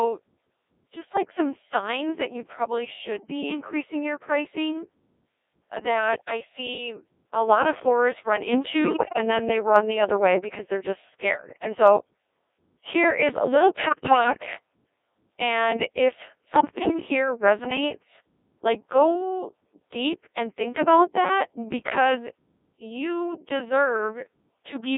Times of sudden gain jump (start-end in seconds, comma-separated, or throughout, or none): 7.42-24.97